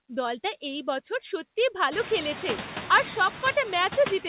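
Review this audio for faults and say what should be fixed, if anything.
Throughout the speech, the background noise dips only slightly between words, by about 1 dB, before swelling back under the voice. These are noise suppressor artifacts: the suppressor estimates which frequency bands hold steady noise and lowers them frame by frame. Here it removes almost nothing, so it is ineffective against the room noise. That noise climbs by about 20 dB at roughly 2 s and ends up about 15 dB below the speech. Nothing is heard above 4 kHz, which fits a telephone-band call codec. To prevent this, tune or replace the suppressor so its noise estimate adapts quickly to the rising background and applies a meaningful reduction.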